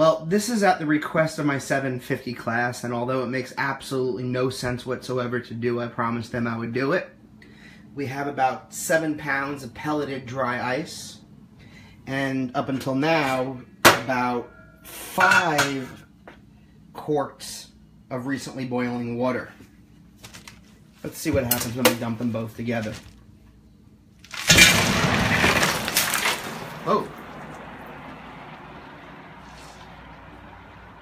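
No technical faults can be heard anywhere in this audio. There is nothing here that calls for a timestamp or an explanation.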